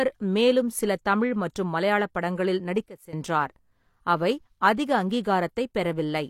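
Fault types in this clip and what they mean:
Sudden gain jump: Just after "தமிழ் மற்றும் மலையாள படங்களில்", at 2.86 s, the speech and the background noise beneath it drop together by about 15 dB in a single step, with no fade, and stay down until 3.13 s before returning. Because both fall at once, the change sits in the signal chain rather than in the talker. The likely cause is a digital gain setting applied instantly, without a ramp, from one sample to the next.
Pre-echo: At 5.1 s a brief hiss arrives just ahead of a sharp onset in the speech, smeared about 12 ms before it, so the attack loses some of its crispness. A transform codec spreads its quantisation noise across the whole block it codes. When a sudden attack lands late in that block, noise sized for the loud part also fills the quiet moment before it, and that early hiss is what you hear.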